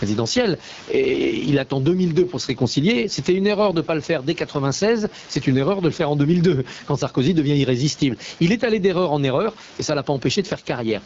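A speech recording with two faults running through its whole length. The first is gain pumping. The gain swings by around 15 dB, so loud and quiet passages sit unnaturally close together and the delivery sounds squashed. The likely cause is input gain set far too high, with a fast limiter or compressor clamping down on each peak and releasing in the pauses. The room noise sits about 33 dB below the speech. The second fault is the AMR wideband (HD Voice) codec at a low rate. Nothing is present above 7.5 kHz, and the speech has a rough, raspy grain throughout, consistent with AMR-WB running at one of its lowest modes, which fits 8.85 kbit/s. At that rate the pulse-driven vocal tract model leaves audible roughness below 6.4 kHz, and the band above it is synthetic shaped noise.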